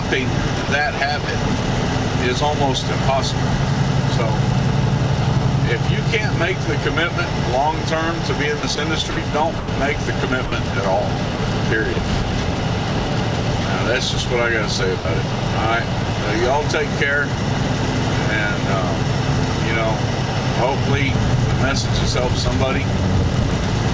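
Sound chopped by the voice detector, at 0.65 to 1.28 s and 8.60 to 9.68 s: the sender's detector likely toggled repeatedly, swapping about 90 ms and 210 ms of quiet detail for comfort noise. The sound turns choppy, with holes where that detail is missing.

Sound dropped by the voice detector, at 10.46 to 10.52 s, 11.36 to 11.39 s, 11.93 to 11.96 s and 14.99 to 15.05 s: the detector likely mistook quiet sound for background, so 60, 30, 30 and 60 ms give way to steady comfort noise. Through all of this, the G.722 call audio stays band-limited, with nothing above 8 kHz.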